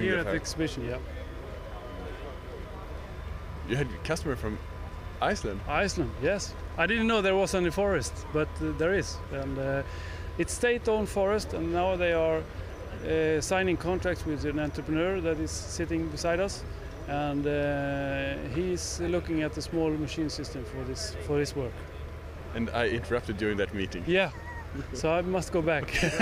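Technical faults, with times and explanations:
No technical faults detected.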